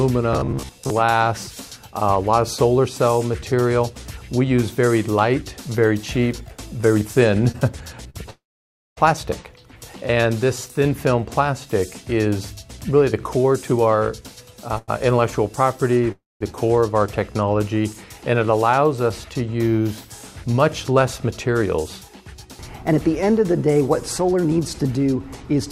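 From 0.33 to 0.90 s the sound turns into a rigid, metallic buzz pitched at about 67 Hz that only loosely tracks the underlying audio. This is robotic sound from repeated short buffers. The buzz rate implies a repeating chunk of roughly 15 ms, so new audio was likely arriving too seldom and the receiver kept replaying the last short buffer. About half of this stretch is repeated material, with the real audio skipped in its place.

At 7.51 to 7.56 s and again at 8.10 to 8.16 s a sound is briefly held too long, with a faint buzz or dip. These are short stalls from a late packet. Each time a packet was missing when due, so the receiver stretched the last sound until it arrived, for 26 ms and then 45 ms. It then resumed at the same point, so nothing is lost, but the timing is pushed back by that amount.

From 8.30 to 8.99 s the audio freezes. A short buzzing or hissing tail fades into about 580 ms of silence, and the sound then carries on exactly where it stopped. 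This call audio freeze most likely comes from packets held up in transit, which emptied the jitter buffer. The gap adds 664 ms in total without dropping any content.

Between 13.37 and 14.71 s the audio runs noticeably faster, at 109% speed, yet keeps its pitch. This is a jitter buffer speed-up. The receiver trimmed many tiny pitch-period slices, about 0.15 s in all, to shed the delay that had built up. Straight after, at 14.78 to 14.90 s, another short stall from a late packet holds a sound for 97 ms.

At 16.12 to 16.42 s a second call audio freeze inserts a 287 ms gap, about 190 ms of it silent, likely from another delivery hold-up. The audio again resumes from the same spot.

From 20.57 to 25.59 s the audio sounds slightly hurried, at 106% speed with unchanged pitch. This is a longer jitter buffer speed-up that removes roughly 0.3 s to bring the delay back down.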